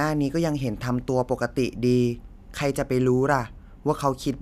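No technical faults can be heard anywhere in this speech recording. Nothing in the audio calls for a time mark or an explanation.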